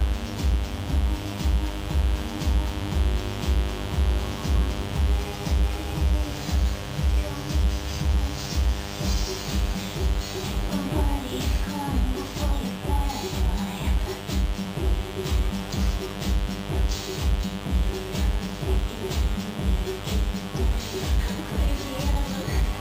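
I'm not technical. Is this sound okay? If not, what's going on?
No, there is mains buzz, a steady raspy hum running under the whole recording, caused by electrical interference from the 50 Hz power supply leaking in, and it's fairly loud.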